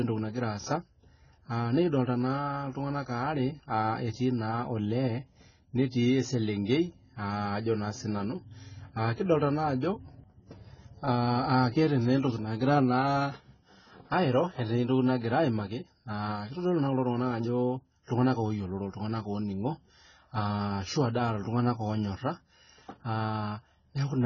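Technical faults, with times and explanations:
Throughout, AAC compression: nothing above 7.1 kHz. Sibilants sound dull, smeared and fizzy. Likely heavy AAC-LC coding, fitting a bitrate near 16 kbps.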